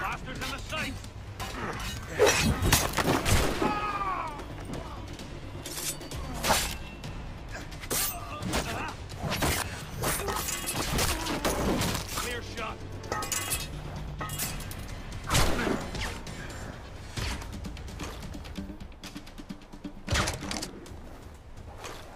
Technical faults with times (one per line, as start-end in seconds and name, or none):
none